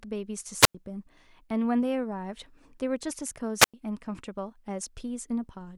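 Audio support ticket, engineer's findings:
Wireless microphone squelch dropout, 0.59–0.75 s and 3.59–3.74 s. Brief hiss rise, then roughly 95 ms near-silent hole each time, speech returning. Probable component: analogue FM RF link. Signal fades below threshold; receiver squelch mutes output until carrier recovers.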